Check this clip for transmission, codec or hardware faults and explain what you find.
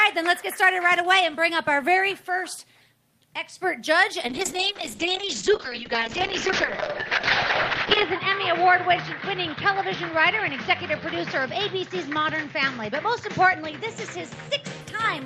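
One transmission fault is present: a call bitrate drop running from 4.28 s to 14.87 s. Across that stretch the sound turns rough and watery, and the top end goes dull and muffled, with the worst of it lasting about 3.8 s. The call's bandwidth estimate fell, so the encoder spent far fewer bits, consistent with a fall from 32 to 7 kbps, coding more coarsely and cutting audio bandwidth from 20 kHz to 8 kHz.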